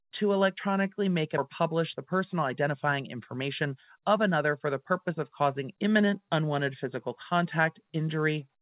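Right after "to electronically make", at 1.38 s, there's a skip ahead: roughly 0.7 s of speech is dropped and the two sides butt together with no gap. From 1.47 to 5.31 s a jitter buffer speed-up runs it about 7% fast at the same pitch, trimming around 0.3 s, and it sounds hurried until "causing imminent".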